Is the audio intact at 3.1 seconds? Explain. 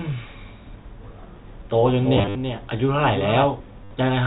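No. At 3.1 s the speech carries a doubled audio track, present from 1.85 to 3.45 s. A second full-band copy trails by roughly 0.3 s, about 10 dB quieter, dry and uncoloured, likely from a slower capture path mixing the same signal in twice.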